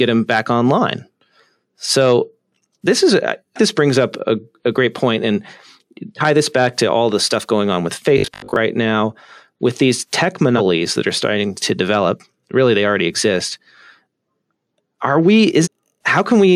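At 3.55 to 3.59 s, between "this is I" and "this brings up a", compressed frames are skipped. About 400 ms of audio is lost in whole 46.4 ms frames, heard as a smeared blip. On a spectrogram it shows as a brief vertical smudge at the join. The same fault returns at 10.57 to 10.61 s after "now with these tech", dropping about 200 ms, and at 15.63 to 15.68 s, dropping about half a second.

From 8.18 to 8.56 s, after "stuff going on with", there is a rigid metallic buzz at 50 Hz. This is robotic sound, likely from repeated short buffers of about 20 ms. The spectrogram shows evenly spaced harmonic stripes, and the waveform shows identical repeating cycles.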